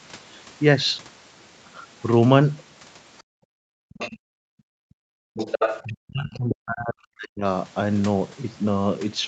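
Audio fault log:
3.18–3.23 s, 3.89–4.18 s, 5.34–5.88 s and 6.51–6.55 s: other side's voice leaking through. A second, fainter talker surfaces under the main speech. The two early scraps sit about 35 dB and 15 dB below it, and the later ones rise to about 5 dB and 10 dB below, so the 5.34 s stretch is nearly as loud as the talker. The likely cause is a loudspeaker echo the canceller failed to subtract. On a spectrogram, extra harmonic stripes appear that do not follow the main talker's pitch contour.
3.5–3.6 s and 5.84–7.45 s: speech suppressed in double talk. The talker's level falls away by up to about 40 dB, briefly in the first case and for roughly a second and a half in the second. This is most likely the echo canceller, unable to separate the near talker from the echo while both sides speak, turning everything down. The waveform envelope shows dips.
4.18–5.34 s: background gated by the echo canceller. 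Right after the leaked echo at 3.89–4.18 s, the room tone drops out, falling by up to about 38 dB for roughly a second. It returns when the canceller releases, just as the next leak begins at 5.34 s. The spectrogram shows the diffuse noise floor going nearly blank across all bands up to the 8 kHz ceiling that the call path sets. The waveform shows the low-level hiss flattening toward silence.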